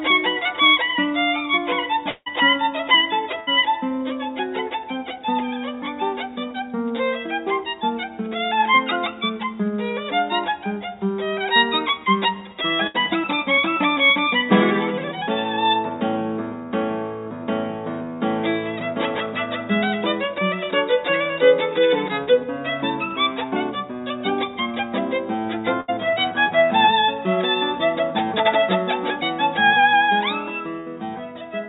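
The audio passes through a call link whose band stops at 4 kHz, which fits G.711 mu-law narrowband coding. From 2.10 to 2.28 s the sound breaks off. A fading buzz or hiss fills the gap, ending in a brief hush, and about 160 ms never returns. This is likely a long network dropout, with the receiver stretching the last sound over the hole. A burst of packet loss hits at 3.40 to 3.49 s, 12.87 to 12.96 s, 25.81 to 25.90 s and 30.80 to 30.88 s. Each time, roughly 60 to 80 ms is lost. The receiver holds the last sound and lets it fade, then playback resumes past the gap. At 22.24 to 22.29 s there is a short concealed packet loss. About 20 ms failed to arrive. The decoder patched it from the preceding sound and blended back, leaving a quick smear.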